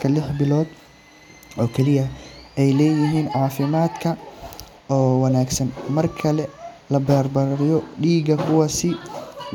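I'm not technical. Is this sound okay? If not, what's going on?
Yes, the recording is technically sound, with nothing going wrong at any point in it.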